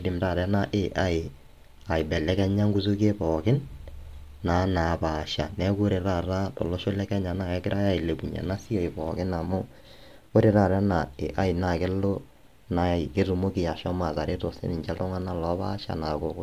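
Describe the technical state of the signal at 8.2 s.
No fault is audible at 8.2 s; the speech signal is intact at that moment.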